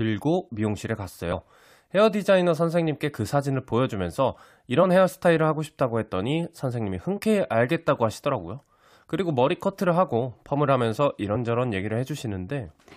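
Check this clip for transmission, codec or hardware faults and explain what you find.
There's one problem here, repeated four times: damaged data in the compressed stream. Short glitches land at 1.31–1.33 s, 4.82 s, 7.16–7.19 s and 11.34–11.36 s, each only about 20 ms long. At each spot the decoder hit corrupted bytes, couldn't make sense of those frames, lost sync and skipped ahead to the next valid frame header. You hear each one as a quick glitch cutting into the speech.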